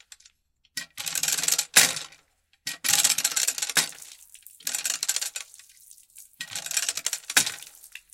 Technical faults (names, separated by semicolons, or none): none